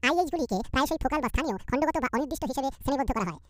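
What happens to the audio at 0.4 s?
At 0.4 s, as throughout, the speech sounds chipmunk-high and rushed, running twice as fast and a full octave up. This is a wrong sample rate: the samples play back at double their recorded rate with no conversion, consistent with 24 kHz audio played at 48 kHz.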